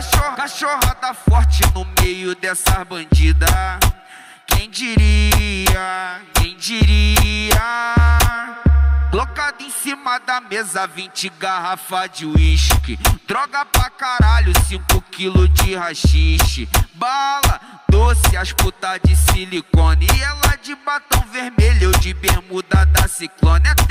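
At 1.97, 4.51 and 13.74 s, from 18.24 to 18.59 s, and at 19.28 s, integer overflow wraps peaks pushed just past the limit, by about 1 dB at most, to the opposite sign. That yields violent full-range cracks rather than clipping's flattened, buzzy distortion.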